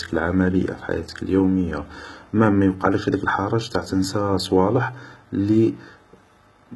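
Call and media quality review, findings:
Likely HE-AAC compression across the whole speech clip, heavy damage, consistent with a very low bitrate near 16 kbps. Treble rebuilt by spectral band replication from copied lower bands, coarsely shaped. Sibilants gritty and metallic, harmonics misaligned above the crossover. Nothing above 11.8 kHz.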